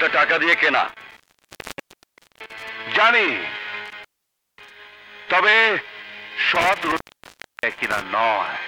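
Three bursts of intermittent contact occur, spanning 0.89 to 2.69 s, 3.86 to 4.70 s and 6.55 to 8.05 s, with the line open for about 1.24 s, 0.54 s and 0.67 s respectively. A loose plug or cable breaks the connection, so the sound cuts out with crackle at each make and break while faint hiss persists during the gap. That scratchy edge and residual hiss distinguish it from a clean digital dropout, which falls to silence.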